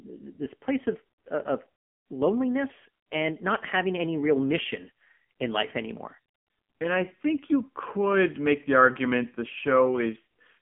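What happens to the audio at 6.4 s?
At 6.4 s, as throughout, the AMR narrowband mobile codec cuts everything above 3.5 kHz; unlike a plain low-pass, its pulse-driven vocal model adds heavy buzzy, synthetic coloration, fitting roughly 6.7 kbps.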